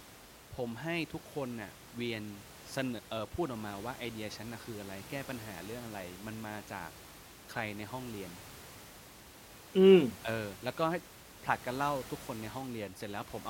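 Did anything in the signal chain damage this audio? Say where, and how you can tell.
No, nothing in the chain seems to have damaged this speech, and the only thing under it is the room's own background noise, sitting about 18 dB below the voice, which was in the space when it was recorded.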